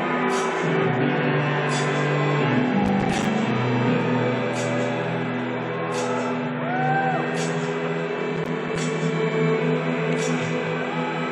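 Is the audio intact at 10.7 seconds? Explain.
Yes, the audio is intact at 10.7 seconds, with no dropout, click, distortion or other fault at that point.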